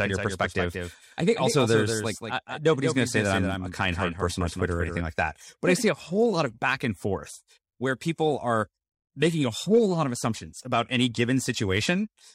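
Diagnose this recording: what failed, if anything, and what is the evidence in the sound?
Doubled audio track, 0 to 5.0 s: a copy lags about 200 ms, ending abruptly before "like that but I". Likely a slower capture path.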